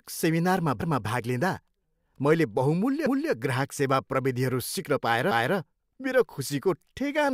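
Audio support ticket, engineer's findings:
Overlapping chunks in the streaming or processing stage. At 3.06 s each chunk starts before the previous one has finished, which fits 2 s chunks. About 250 ms of speech plays twice, ending at 3.32 s, and is heard as a stutter or repeat at the join.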